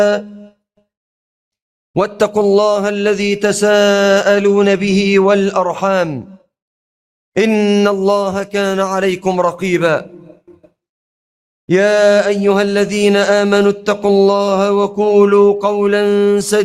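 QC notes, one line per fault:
No faults found on this pass; nothing to log.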